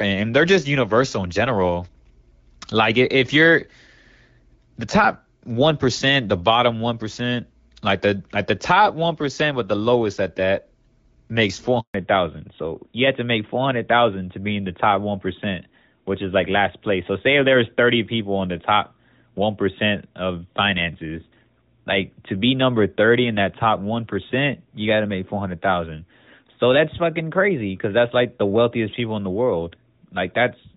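This is a speech clip with two linked faults. Right after "makes four", a handover gap silences the audio from 11.80 to 11.94 s, about 140 ms, while the call switches networks. From 11.94 s to the end there is a fallback to narrowband: nothing above 4 kHz remains, so the sound turns duller and rougher. Before the switch, the audio has the fuller band and light artefacts of AMR wideband (HD Voice) coding, which fits a mid rate near 12.65 kbit/s.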